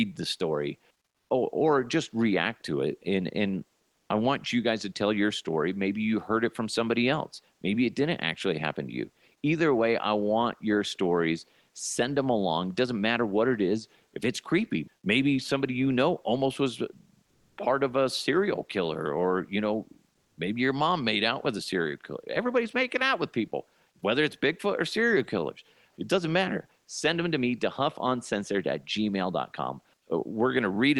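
A speech recording in which the quiet background between phrases turns briefly into a flat, featureless hiss at 3.95–4.09 s, 17.25–17.57 s (between "you know almost was" and "part of a serial") and 20.17–20.37 s (between "killer or you know" and "maybe your mom made"), with the level shifting by about 1 to 3 dB. This is comfort noise in place of the background, likely from Opus discontinuous transmission synthesising noise during detected silence. At 20.35–20.37 s, "maybe" starts abruptly without its soft attack, about 20 ms missing, an onset clipped likely by the voice detector reacting late. The audio carries Opus coding through a call path, with content stopping near 12 kHz, consistent with about 40 kbps.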